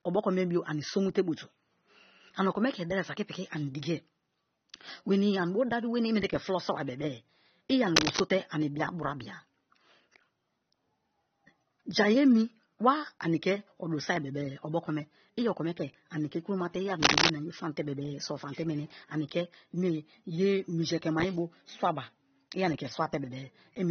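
Throughout the speech, the artefacts of a heavily compressed encode sit inside a file with nothing above 20 kHz. That points to low-bitrate audio saved at a high bitrate, likely a roughly 24 kbit/s AAC source re-encoded as MP3 at about 320 kbit/s. Unlike a single poor encode, the large second file adds almost no artefacts of its own and cannot restore what the first removed.

From 7.96 to 8.20 s, just after "i ani", and again from 17.02 to 17.30 s, between "ke kromate i" and "ani ye famte", dense uneven rustling rides over the sound at about 5 dB above it. This is cable scratch noise, likely a worn connector or control being moved so that its contact resistance flickered. Its irregular bursts, rather than isolated clicks or steady hiss, set it apart.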